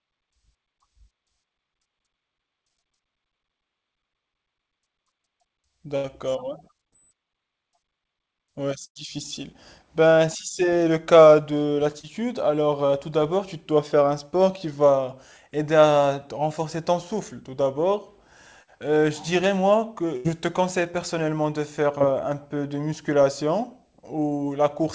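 Burst of packet loss at 5.96 to 6.06 s: roughly 80 ms of the call arrived too late or not at all, so the receiver stretched the last sound into a fading buzz or hiss before the speech jumps ahead. Short concealed packet loss follows at 6.88 to 6.93 s, where about 40 ms was patched by continuing the previous sound and blending back, heard as a brief smear or wobble. Another burst at 8.85 to 8.97 s hides about 100 ms the same way. Short concealed losses recur at 11.99 to 12.05 s (about 40 ms) and 12.87 to 12.91 s (20 ms). A burst at 20.17 to 20.26 s hides about 80 ms, and a final short concealed loss at 21.98 to 22.02 s covers 20 ms. Throughout, nothing sounds above 8 kHz, which fits a wideband call codec such as G.722.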